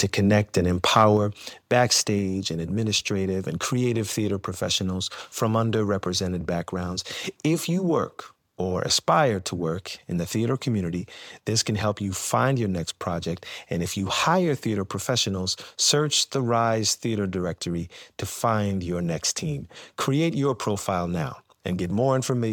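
Just after "connect and", from 0.96 to 1.02 s, the loudest peaks turn harsh and crackly. This is microphone overload. The input volume was likely set too high. Peaks run about 1 dB past the converter's limit. A small share of waveform tops are sliced flat.

At 1.17 s, voice and background drop together, suddenly, by about 4 dB. This is the microphone volume stepped down. The call software likely reacted to that clipped peak. It lowered the input level in one abrupt step.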